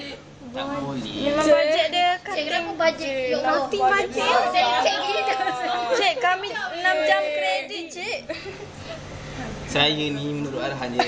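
Nothing here jumps out as a technical fault, so there's nothing to flag.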